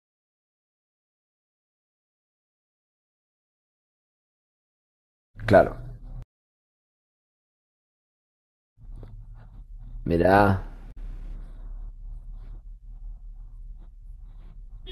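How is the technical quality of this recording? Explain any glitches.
The recording has one glitch, caused by damaged data in a compressed stream, from 10.91 to 10.97 s, about 60 ms. A stretch of the encoded speech was corrupted, with bytes lost, zeroed or overwritten. The decoder misreads those frames, loses its place in the bitstream and hunts for the next valid frame header before normal playback resumes. Briefly, the speech gives way to a chirp, squawk, click or short hole.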